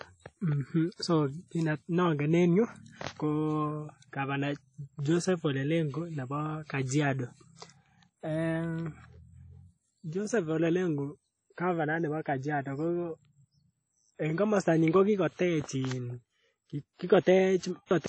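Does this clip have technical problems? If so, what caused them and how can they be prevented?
Yes. Throughout the recording the speech has a ringing, washy texture, with a hiss that rises and falls with the signal, and nothing is present above about 10.1 kHz. This points to WMA compression as the likely cause. A transform encoder at a low rate, which fits around 32 kbps, discards weak spectral detail and smears quantisation noise across each block. To prevent it, record or deliver in a lossless format or at a substantially higher bitrate.

At 17.59 to 17.63 s there is pre-echo: a brief hiss, about 41 ms long, arrives just before a sharp attack, and the attack itself sounds softened. The encoder spread its noise evenly over a block in which the onset fell late. The noise level set by the loud onset therefore also filled the quiet stretch before it. To prevent it, use a codec or encoder setting that switches to short blocks on transients, or avoid lossy encoding.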